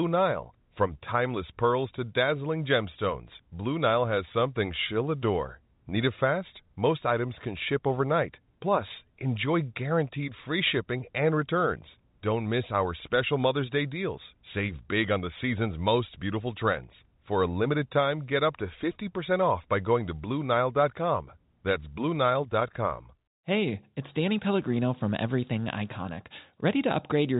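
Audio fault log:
No fault in this audio.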